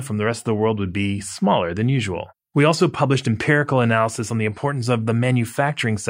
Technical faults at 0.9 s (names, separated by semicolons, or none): none